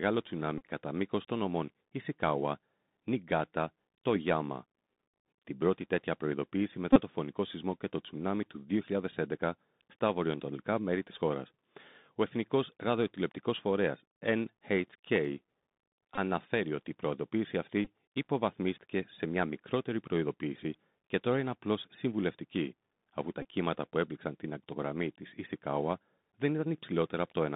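Bluetooth CVSD headset codec damage runs throughout. The sound is held to a narrow line band of roughly 150 Hz to 3.7 kHz, consistent with 64 kbps CVSD. A one-bit up/down coder with an adapting step cannot follow fast high-frequency swings, so sibilants turn scratchy and a granular hiss sits under the speech.

The Bluetooth headset packet repeated fault occurs at 0.58 to 0.65 s, 6.93 to 7.01 s (after "πρώτη τέτοια προειδοποίηση"), 16.16 to 16.19 s, 17.85 s (before "υποβαθμίστηκε σε μια μικρότερη"), and 23.42 to 23.45 s (after "απλώ συμβουλευτική αφού τα"). Lost packets were filled by re-decoding the previous one, replacing 15 to 30 ms of audio each time with a brief buzzy repeat near 267 Hz.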